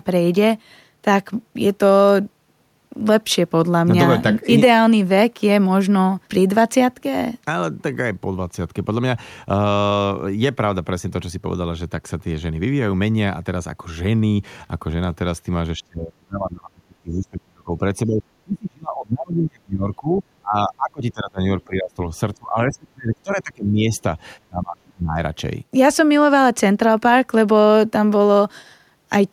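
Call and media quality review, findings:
Speech suppressed in double talk, likely the echo canceller confusing near-end speech with loudspeaker echo while both sides talk and attenuating everything. Speech dips by about 25 to 35 dB at 15.78–17.81, 18.06–21.41, 21.67–22.11, 22.36–23.90 and 24.49–25.19 s.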